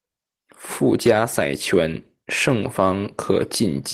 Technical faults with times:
none

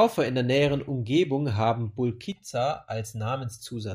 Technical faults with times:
2.32-3.60 channel delay (comb filtering)

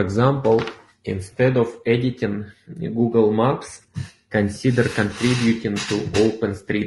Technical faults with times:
0.00-6.87 low-delay AAC compression

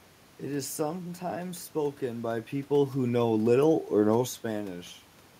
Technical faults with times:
none

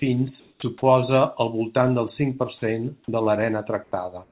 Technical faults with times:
0.40-0.62 sound dropped by the voice detector
2.58-2.62 sound dropped by the voice detector
3.84-3.92 comfort noise in place of the background
4.24-4.32 comfort noise in place of the background

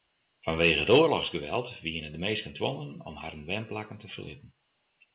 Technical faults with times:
0.61-0.98 microphone overload
1.02 microphone volume stepped down

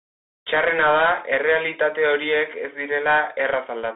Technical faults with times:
0.00-3.95 Bluetooth CVSD headset codec

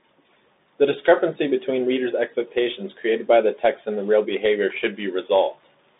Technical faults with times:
0.00-6.00 Bluetooth CVSD headset codec
4.70-4.84 loose connector crackle

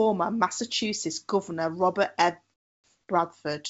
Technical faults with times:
2.54-3.08 comfort noise in place of the background

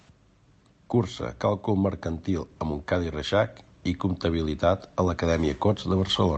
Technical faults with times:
0.92-6.38 automatic gain rising

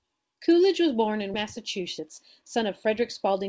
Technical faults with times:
1.34-1.36 skip ahead
1.58-3.42 jitter buffer speed-up

